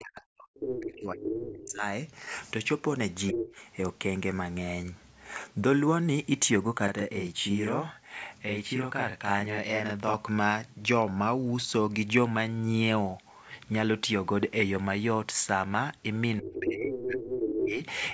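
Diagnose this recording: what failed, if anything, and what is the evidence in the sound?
Speech suppressed in double talk, at 0.0 to 1.83 s, 3.32 to 3.47 s and 16.4 to 17.79 s. The stage is call processing. The talker's level collapses by about 40 dB at worst in the opening stretch, about 15 dB in the brief dip near 3.4 s, and about 25 dB near the end. Each drop lands where a second voice is present. The likely cause is an echo canceller that could not tell the local talker from loudspeaker echo and attenuated everything while both sides spoke.

Other side's voice leaking through, at 0.55 to 1.73 s, 3.32 to 3.53 s, 16.53 to 16.6 s and 16.92 to 17.68 s. This also belongs to call processing. A second voice sits underneath, about 5 dB below the talker in the first two stretches and about 10 dB below in the short scrap at 16.5 s. From 16.92 s it reaches roughly equal level. The far end's loudspeaker playback likely reached the microphone and was not fully cancelled, so residual echo passed into the send path alongside the suppression above.

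Channel delay (doubling), from 6.88 to 10.14 s. The stage is the driver or buffer. Throughout this span every onset is followed 40 ms later by an equal-level copy, which gives a doubled, slapped quality. One channel ran late by a buffer's worth of samples, and the two were then summed to mono, so both copies play at the same strength. The band ends at 8 kHz, consistent with the call path's microphone processing.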